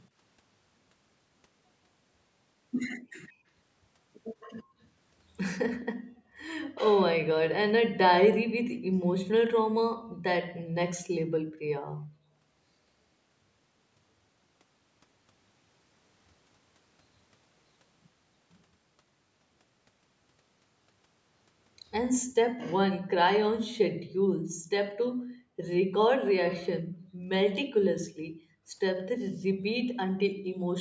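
From 2.99 to 3.47 s, background gated by the echo canceller: the room sound dips by about 26 dB and returns. Nothing is added, unlike echo. At 3.28 to 3.33 s and again from 4.4 to 4.63 s, a faint copy of the speech trails 155 ms behind, about 30 dB down, likely an echo leak from a loudspeaker the canceller missed. Gating recurs at 4.63 to 4.8 s (about 31 dB), then 5.94 to 6.39 s, 8.83 to 10.74 s, 23.93 to 25.6 s and 26.82 to 30.47 s, each dropping the background by about 40 dB.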